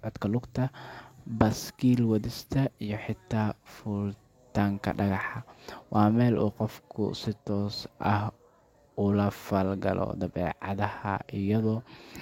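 Nothing goes wrong anywhere in this speech recording, so there are no technical faults to point out.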